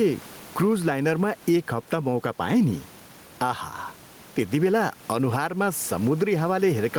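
Throughout the speech there is gain pumping: the room background swells by roughly 10 dB in gaps and ducks under each loud sound, likely from an overdriven input and a fast limiter. Unlike a noise gate, it never silences the background.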